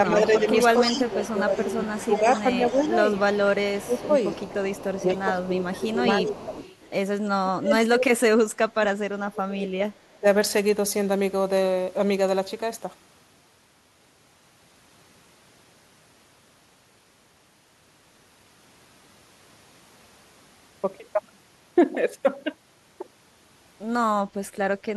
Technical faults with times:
0.09-2.63 speech suppressed in double talk
0.37-5.22 echo leak
3.20-6.51 speech suppressed in double talk
6.20-6.90 echo leak
7.40-10.27 speech suppressed in double talk
24.78-24.82 echo leak

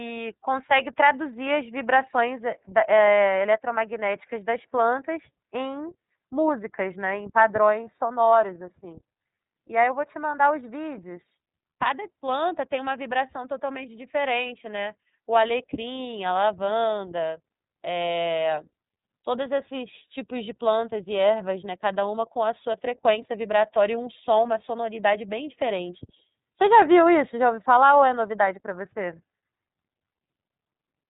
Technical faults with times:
0.00-31.10 iLBC codec

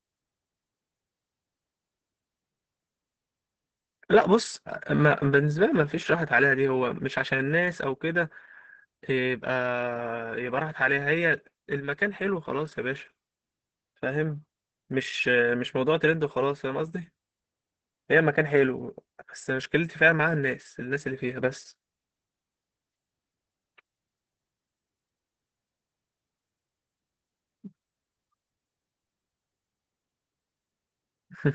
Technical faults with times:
0.00-31.55 Opus voice compression

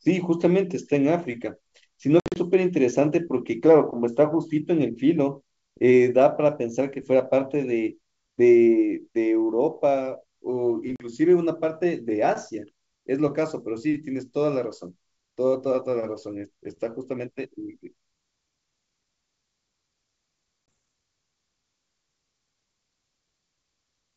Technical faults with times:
2.20-2.37 packet loss on an ADPCM call
10.96-11.07 packet loss on an ADPCM call
20.66 packet loss on an ADPCM call

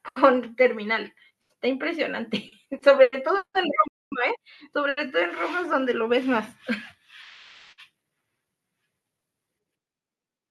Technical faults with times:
3.88-4.12 playback stall

